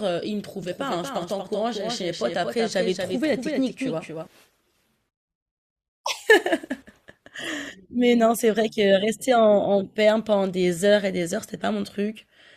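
From 0.63 to 4.27 s, a doubled audio track: a slower second path likely mixed in a dry, somewhat quieter copy roughly 200 ms late, starting and stopping abruptly.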